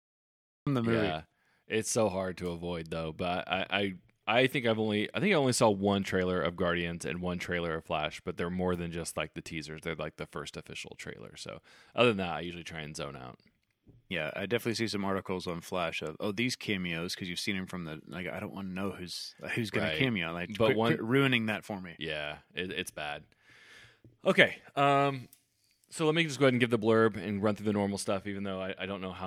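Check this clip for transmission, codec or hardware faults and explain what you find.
There is one fault, a cut-off start at 0.67 s. Capture began late, so the first 0.67 s are digital silence and the speech then jumps in mid-sound with no natural attack or fade-in. The onset lands abruptly, as if already under way.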